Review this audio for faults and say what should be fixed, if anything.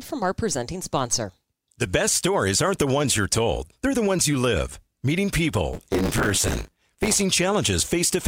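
The writer of the ring buffer slipped against the hardware reader, causing buffer tearing from 5.73 to 7.23 s: about a fifth of each 10 ms period replays speech from roughly 20 ms earlier, a robotic 100 Hz buzz. Keep the writer safely ahead with larger buffers.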